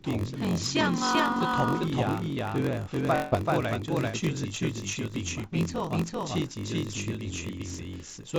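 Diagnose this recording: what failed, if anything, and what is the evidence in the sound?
Doubled audio track, at the mixing or capture stage: the whole speech clip carries a second full-band copy at roughly equal level, trailing by around four tenths of a second, with no decay or room colour, so it reads as a hard slapback rather than a reflection. The likely cause is a second, slower capture path or an edit holding two copies out of step. On a waveform every syllable onset appears twice at a fixed spacing. On a spectrogram each pattern is repeated, equally bright, shifted along the time axis.

Block size mismatch (padded), at the driver or buffer stage: a steady buzz at 46.9 Hz runs throughout, and the speech plays at 0.938 times normal speed with its pitch essentially unchanged. Each 1024-sample read is only partly filled and the remainder is zeroed, which fits roughly 960-sample blocks being written into 1024-sample reads. 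The waveform shows short flat gaps at a regular 21 ms spacing. The spectrogram shows thin vertical dropout lines and a comb of harmonics at multiples of the block rate.

Short concealed packet loss, on the network leg of the call: two brief smears, at 2.32–2.38 s and 4.09–4.15 s, each covering about 40 ms of missing audio. The receiver filled each hole by extending the preceding sound and then cross-faded back into the real signal, which leaves a small wobble. On a spectrogram, each gap appears as a short stretch of smoothed, over-regular harmonics or blurred noise with the fine detail missing.

Long network dropout, at 3.15–3.34 s: about 160 ms of audio never arrived, and nearly all of it was filled by concealment, so nothing falls fully silent. The continued sound turns into a fading buzz or hiss, and the speech then resumes with the lost portion gone. The likely cause is a burst of lost or late packets. 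The spectrogram shows the continued sound steadily dimming with no new structure until the real signal returns abruptly. The call path itself, a G.722 link at 64 kbps, shows its expected empty band above 8 kHz.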